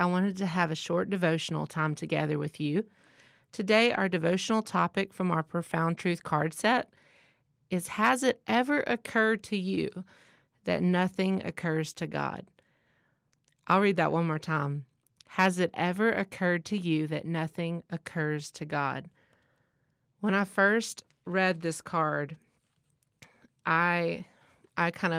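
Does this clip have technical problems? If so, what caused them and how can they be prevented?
No, this clip has no technical problems, so there is nothing to explain or prevent.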